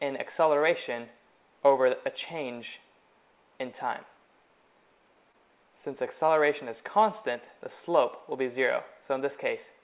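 Audio carried over a call path, where roughly 20 ms of packets twice arrived too late, at 5.32 to 5.36 s and 6.26 to 6.30 s. The receiver bridged each gap by extending the preceding sound, a short concealed packet loss heard as a brief smear or wobble. The band-limiting to 4 kHz fits the G.711 mu-law codec on that path.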